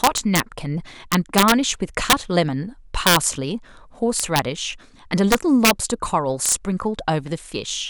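A speech clip with integer overflow: the level was pushed about 3 to 6 dB past the integer limit, and peaks wrapped to the opposite sign instead of clipping. This causes violent, sharp cracks at 0.04–0.40, 1.12–1.52, 2.10–2.13, 3.07–3.16, 4.20–4.39, 5.32–5.71 and 6.46–6.52 s.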